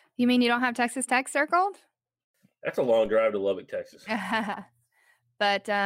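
A DC step at 3.06 s, between "a long" and "drive to", shifts the waveform's zero line; it decays through a 5 Hz high-pass, heard as a brief low thump.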